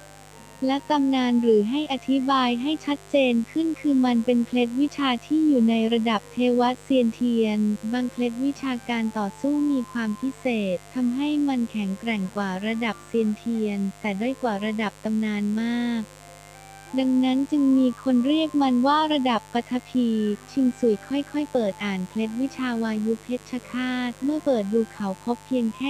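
A mains buzz runs through the whole clip, a steady, raspy hum sitting roughly 25 dB below the wanted sound. Sharp switching spikes, likely from a dimmer, rectifier or unshielded cable, enter the signal twice per 50 Hz cycle, so the interference repeats at 100 Hz and carries a dense series of 50 Hz harmonics climbing into several kHz. On a spectrogram this shows as evenly spaced horizontal lines from start to finish. The waveform carries a regular spiky ripple.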